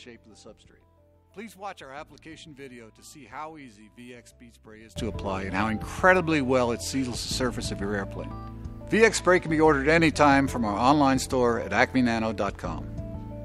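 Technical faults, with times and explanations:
0.00–4.96 s, one channel inverted: likely a polarity flip on one side, so centred content cancels in mono, dropping about 21 dB to a faint residue.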